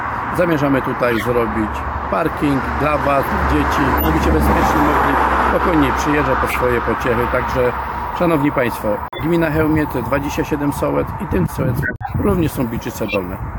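At 1.11 to 1.27 s, 3.98 to 4.07 s and 6.47 to 6.56 s you get a corrupt frame decoded: bit-flipped frames played anyway, so energy lands at the wrong frequencies and each comes out as a short, chirpy burst peaking around -5 dBFS, spanning a couple of frames or so. Then at 9.08 to 9.23 s there's a corrupt frame muted. The decoder rejected the damaged data and the player dropped in silence, an abrupt hole of about 0.15 s that fits three frames. A longer one follows at 11.83 to 12.13 s, about 0.31 s, consistent with six frames gone. Finally, another decoded corrupt frame squeaks through at 13.05 to 13.16 s, the same kind of brief noisy blip as the earlier ones.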